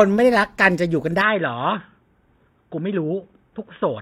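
From 1.21 s to the end the speech turns dull and boxy, nothing above 3.8 kHz, about 5 dB quieter with fresh background noise: likely an input switched to a poorer device.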